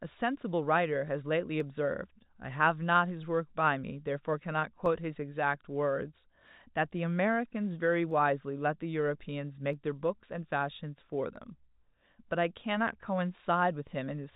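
A click recurs roughly every 1.63 s from 1.60 s to 12.98 s, about seven in all. These are clock drift buffer slips, likely from two clocks disagreeing by a couple of hundred parts per million, so a short block of samples is periodically dropped or repeated. The telephone-band G.711 coding stops near 3.8 kHz.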